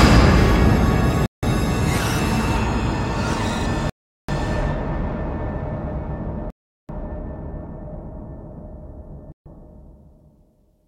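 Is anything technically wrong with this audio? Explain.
Yes. At 1.26 s, 3.90 s, 6.50 s and 9.32 s the sound drops to silence for about 0.17, 0.39, 0.39 and 0.14 s, then resumes. This is likely a Bluetooth stall, with the receiver's buffer running dry while delayed packets were resent. It shows as flat, empty gaps in the waveform and blank vertical bands on a spectrogram.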